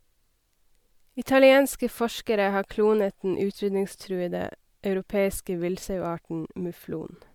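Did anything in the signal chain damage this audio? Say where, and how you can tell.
Yes, generation loss runs throughout the speech, and it points to the codec stage, most likely repeated lossy encoding, consistent with MP3 at around 128 kbit/s re-encoded about four times. Each decode and re-encode quantised the signal again on a shifted frame grid, so the errors stacked: the sound has a swirly, hollow texture with smeared consonant attacks, rougher than a single pass would leave, though content still extends to about 20.1 kHz.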